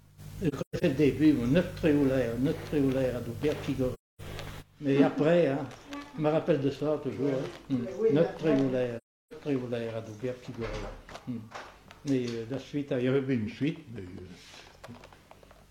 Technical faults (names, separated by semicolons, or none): AAC frame loss with muting